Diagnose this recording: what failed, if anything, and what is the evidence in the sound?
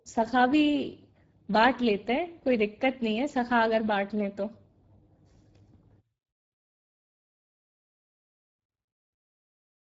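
The failure is at the codec stage: Speex coding throughout the speech. The damage is plainly audible. The speech sounds noisy and hoarse, with too few bits for the excitation signal. Nothing remains above 7.6 kHz. The degree of damage fits a bitrate near 10 kbps.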